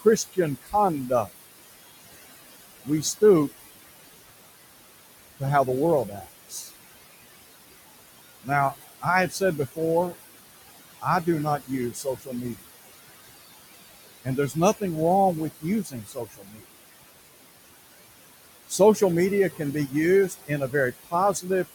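A speech recording carries noise suppressor artifacts from start to finish. The room noise, sitting about 13 dB below the speech, is pulled down by about 18 dB in the gaps and then swells back under each phrase. On a spectrogram the background shows as a patchy, pumping floor, with scattered isolated bins twinkling between words instead of an even haze. The suppressor also causes speech cut by the noise suppressor. It mistakes quieter parts of the talker for noise and drops them by about 16 to 20 dB, so soft consonants and word endings sound swallowed. This happens at 0.00–1.32 s, 2.84–3.54 s, 5.39–6.70 s, 8.44–12.63 s, 14.24–16.66 s and 18.69–21.46 s. Within each stretch only brief fragments are hit, adding up to somewhere between a tenth of a second and about a second. In the waveform these appear as abrupt notches in the envelope, and on the spectrogram as missing high-frequency consonant energy at syllable edges.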